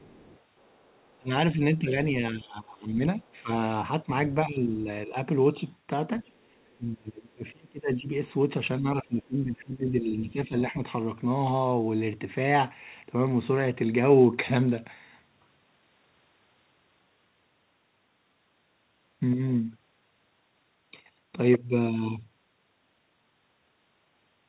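From the start to 1.18 s, the echo canceller has likely left part of the loudspeaker signal in the microphone feed, so the other side's voice is leaking through, faint at roughly 30 dB below the talker, as a second voice underneath. A brief scrap recurs at 6.69 to 6.73 s, fainter still at around 40 dB down.

Speech is suppressed in double talk from 1.19 to 1.97 s, 2.31 to 3.5 s, 4.05 to 4.09 s, 4.46 to 5.15 s, 6.75 to 8.13 s and 8.79 to 10.74 s. With both sides talking at once, the canceller has likely failed to separate the near talker from the echo and attenuated everything. The talker's voice dips and breaks up in pieces. The drops reach around 20 dB in three stretches, only about 10 to 15 dB near 4 to 5 s, and close to 30 dB in the 6.75 s stretch. The longest losses total well over a second in the last two spans.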